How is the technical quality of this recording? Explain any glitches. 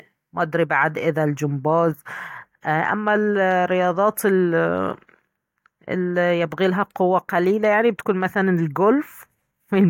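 The recording has no audible technical glitches, and its signal stays steady and intact throughout.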